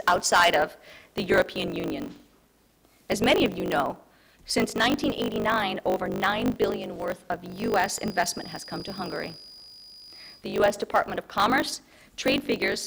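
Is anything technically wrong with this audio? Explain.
Yes. A block size mismatch (truncated) runs throughout: each block is longer than the next stage reads, which fits a 1024-sample write, so its tail is dropped. This causes a 50 Hz buzz and audio running about 1.07 times fast at roughly normal pitch. Spectrograms show 50 Hz harmonic lines, and waveforms show jumps every 20 ms.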